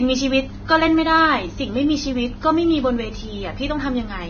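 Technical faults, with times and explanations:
Throughout, low-bitrate audio saved at a high bitrate: the speech has nothing above 6.5 kHz, likely from a heavily squeezed first encode, and the larger MP3 can't restore it.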